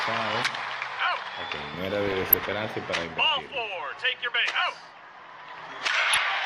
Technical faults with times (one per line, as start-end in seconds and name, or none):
0.00-6.46 MP2 compression
2.06-2.61 DAB burbling
6.13-6.24 DAB burbling